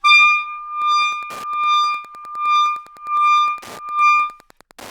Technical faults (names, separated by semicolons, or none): Wi-Fi interference